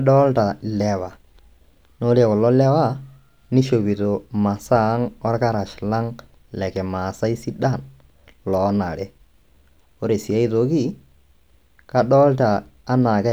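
No technical faults can be heard anywhere in this speech clip.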